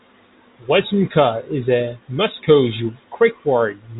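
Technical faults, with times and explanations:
No technical faults can be heard, so there are no times or explanations to give.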